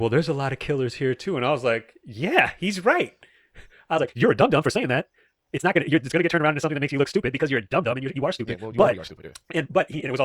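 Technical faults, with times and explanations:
3.93 s to the end, time-stretched section: the speech abruptly runs at double speed while its pitch stays where it was, so it sounds rushed rather than high and squeaky. This likely comes from software compressing that stretch to fit a shorter length, keeping pitch by cutting out short slices of the waveform and butting the remaining pieces together.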